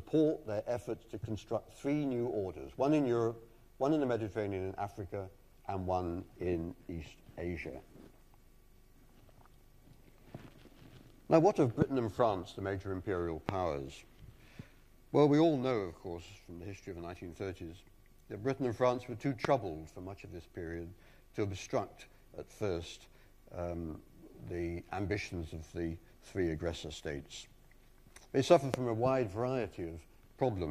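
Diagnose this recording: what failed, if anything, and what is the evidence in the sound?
A likely voltage transient in the analogue wiring, from a loose plug, a switch or static, entered the signal path four times. Each time a brief pulse was added to the sound, and the following circuits shaped it into a loud pop of about 24 ms. The pops arrive at 11.82, 13.49, 19.45 and 28.74 s. The first peaks roughly 15 dB above the surrounding sound, the others nearer 20 dB. The underlying sound continues beneath each one.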